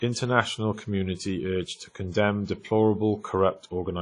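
A short speech recording carries plainly audible WMA compression damage from start to finish, with nothing above 10 kHz. The sound rings and smears, and a hiss swells and fades with the signal. That spreading over tens of milliseconds points to long transform blocks, likely from a WMA encoder at a low bitrate around 32 kbps zeroing weak components. A plain low-pass filter would dull the top without that breathing, washy residue.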